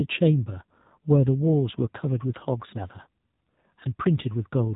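Throughout, the speech sounds buzzy and synthetic and stops above 3.8 kHz: the AMR narrowband mobile codec rebuilds it from a sparse vocal-tract model, suggesting roughly 7.4 kbps.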